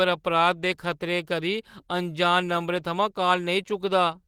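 There are no technical faults to describe in time order in this speech clip, which carries light Opus voice compression at a fullband hybrid setting.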